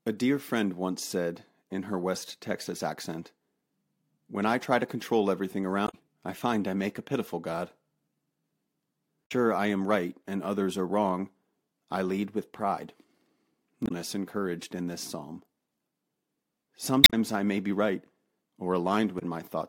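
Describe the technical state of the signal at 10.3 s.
At 10.3 s the speech signal is intact, with no audible fault at that moment.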